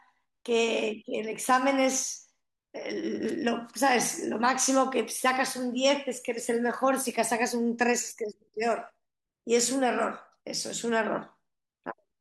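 On listening through this speech recording, nothing stood out as a technical fault at any point.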